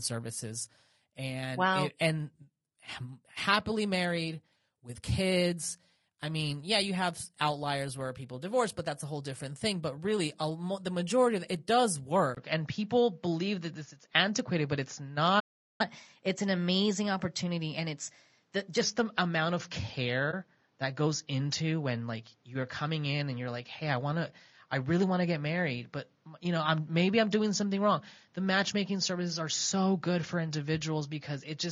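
Low-delay AAC compression runs through the whole clip. The speech is rough and grainy, with noise filling the gaps between harmonics and a thin, artificial-sounding top end. Short codec frames that resolve pitch poorly are the likely cause, which fits AAC-ELD at around 32 kbps.

At 12.35 s, just after "majority of it does", the input is switched to a poorer device. A 20 ms gap marks the change. From then on the band is narrower, so the sound turns duller. The level shifts by roughly 5 dB, and a new noise floor appears about 45 dB below the speech. The likely cause is the system changing to another microphone or headset profile.

A playback stall runs from 15.39 to 15.81 s. The sound cuts out mid-flow for about 0.4 s and then resumes. The likely cause is the player running out of data or its thread being blocked, leaving the output silent until it recovered.

Catch-up at higher speed follows from 15.81 to 18.81 s. 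The player resamples its backlog at 1.1 times normal speed, so the speech runs faster and about a semitone and a half higher for those three seconds before settling back.

AAC frame loss with muting appears at 20.31 to 20.34 s. A 20 ms stretch is missing, consistent with one lost frame whose spectrum the decoder zeroed. The overlapping windows fade the sound out and back in, leaving a brief dip.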